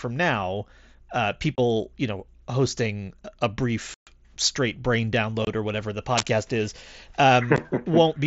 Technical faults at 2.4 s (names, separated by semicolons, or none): none